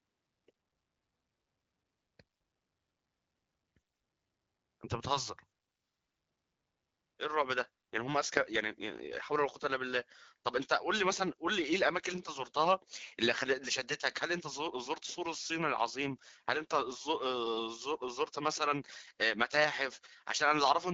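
Twice the link weakens and the AMR rate drops, with the wideband AMR-WB codec forced to spend fewer bits on the speech itself and more on protecting them. From 8.19 to 9.84 s and again from 15.33 to 17.00 s, the speech turns rougher and more synthetic, which fits a step down from 12.65 to 8.85 kbit/s. The bandwidth holds and nothing drops out. Each time, the sound returns to the lightly coded quality around it once the rate recovers.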